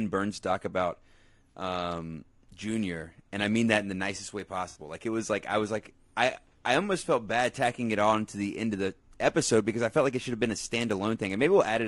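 Low-delay AAC compression runs throughout this speech recording, likely AAC-ELD at a rate that fits about 32 kbps, whose short frames resolve pitch harmonics poorly, leaving the voice rough and grainy. AAC frame loss with concealment appears at 1.50–1.54 s and 4.69–4.79 s, 40 ms and 60 ms gaps consistent with two and three lost frames, where the decoder patches in from the last good spectrum, producing smeared, noisy patches.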